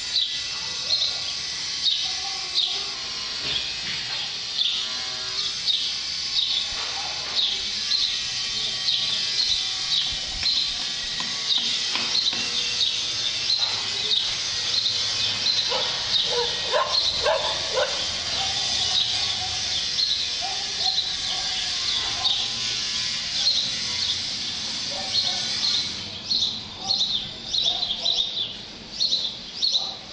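From 2.95 to 5.37 s, a drift correction step slows the sound 5.8% and lowers pitch 103 cents, likely a clock-matching rate change. Spectrogram harmonics drop, then snap back.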